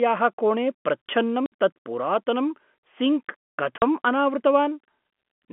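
Speech over a G.711 telephone line, band-limited to roughly 200 Hz to 3.4 kHz, is broken by packet loss filled with silence. A 60 ms hole at 1.46 s precedes "तत् पुरातनं सिङ्क्". A 40 ms hole follows those words at 3.78 s. Both fit lost 20 ms packets replaced by silence, with hard edges.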